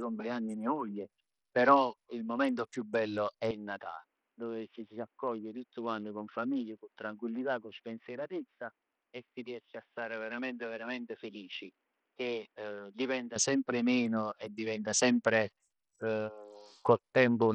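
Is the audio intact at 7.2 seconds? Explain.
No. At 7.2 s the sound sits inside a stretch from 3.51 to 13.36 s where the input appears switched to a poorer device. After "momento più bello è" the speech turns dull and boxy. Nothing comes through above 3.8 kHz. The level falls by roughly 10 dB. A faint new noise floor appears well below the speech. There is no gap at the switch. Clarity returns at "sempre meno e diventa".

Bluetooth SBC compression is also present here, as throughout the clip. Its damage is heavy. The top sub-bands starve for bits, so the treble thins and flickers. The coarse quantisation leaves a gritty noise riding on the speech. That points to a low bitpool, likely near 64 kbps.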